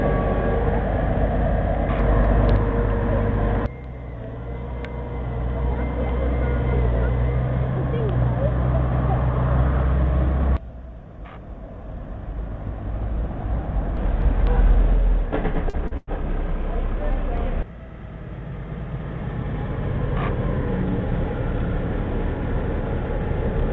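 From 15.55 to 16.09 s there's a stretch of repeated stalls (stutter): the jitter buffer ran dry four times, with the longest wait about 102 ms, and the receiver stretched the last sound to cover about 185 ms, roughly a third of that span. Nothing's actually lost, but it drags and hiccups against the 8 kHz-limited G.722 call sound.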